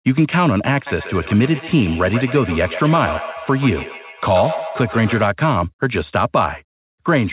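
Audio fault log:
0.87–5.3 s, feedback echo between two devices: a second device in the same room is playing back what the first microphone sent, and that microphone picks it up again, which its echo canceller cannot remove because it only cancels its own playback. The sound comes round again about every 150 ms, each repeat thinner and more ringing, peaking at about 11 dB below the speech, heard through a telephone-band path cut off at 4 kHz.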